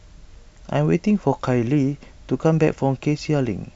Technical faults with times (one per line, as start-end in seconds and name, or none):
none